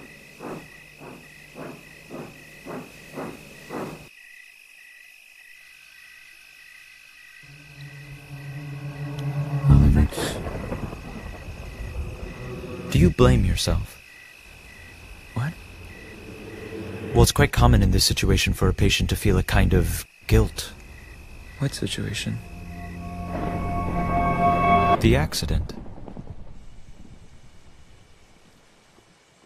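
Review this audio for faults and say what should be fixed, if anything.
Clock slip clicks run from 0.19 s to 29.42 s: faint, regular ticks about every 0.2 s, roughly 150 in all, most noticeable where the sound is loud and sustained. The even spacing points to two devices likely running on separate, unsynchronised clocks about 150 ppm apart, so a single sample is dropped or repeated each time the drift accumulates to one full sample. To prevent it, lock both devices to one shared word clock or master sync reference.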